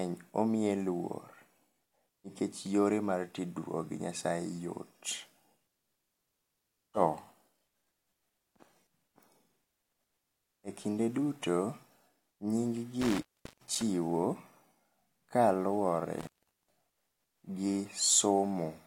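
A speech recording with two dropouts typical of an intermittent contact, where a loose cable or plug briefly breaks the signal path. The first runs from 13.02 to 13.82 s, with the line open for about 0.39 s. The second runs from 16.19 to 16.68 s, open for about 0.41 s. Each gap begins and ends with crackle as the contact makes and breaks, and faint hiss remains while the connection is open.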